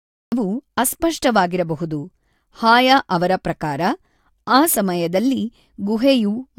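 The clip opens with a cut-off start: from 0 to 0.32 s there is digital silence, then speech begins abruptly mid-sound, because capture started late. The waveform shows a flat line jumping straight into the speech at 0.32 s, and the spectrogram a hard vertical edge with no attack.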